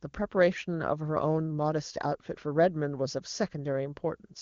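No technical faults occur in this speech clip, so there is nothing to describe in time order.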